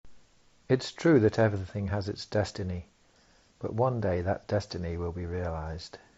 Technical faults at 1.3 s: none

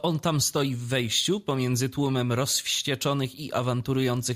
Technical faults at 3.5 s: none

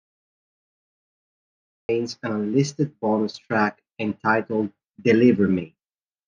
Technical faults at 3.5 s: none

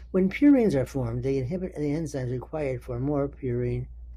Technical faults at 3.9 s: none

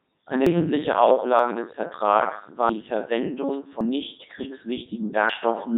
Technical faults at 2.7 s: Codec 2 vocoder; dropped buffer (overrun)

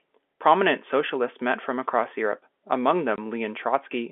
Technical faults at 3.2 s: packet loss filled with silence

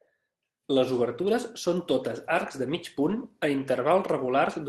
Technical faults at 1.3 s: lost packet rebuilt from error correction

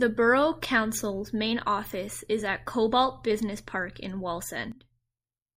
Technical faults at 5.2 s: sudden gain jump

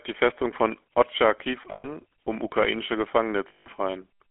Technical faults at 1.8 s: GSM full-rate codec; lost GSM frames

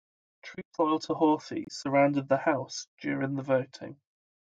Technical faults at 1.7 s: corrupt frame decoded

